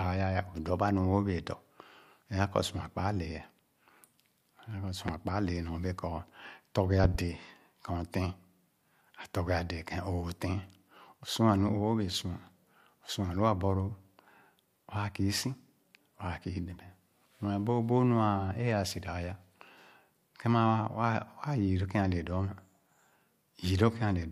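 At 5.08 to 5.11 s a single loud pop cuts in, and from 7.04 to 7.18 s a second event arrives as two pops in quick succession. Both are likely electrical pulses, such as a switch, plug or static discharge, that were added to the signal and shaped by the following circuitry. Each peaks roughly 15 dB above the speech, which continues underneath. On the waveform they appear as tall, narrow spikes. On a spectrogram they form thin vertical broadband stripes.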